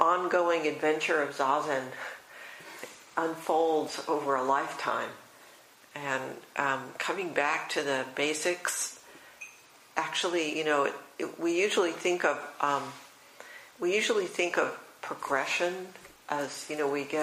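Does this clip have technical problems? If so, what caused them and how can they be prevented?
No, no technical problems heard.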